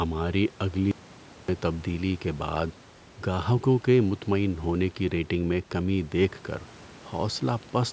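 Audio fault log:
0.91 to 1.48 s, audio dropout to silence: the sound cuts out mid-flow for about 0.57 s and returns on "تبدیلی کے بعد گاہکوں", with no room tone in the gap, likely a lost input link while recording continued; the waveform shows a flat line and the spectrogram a dark vertical band.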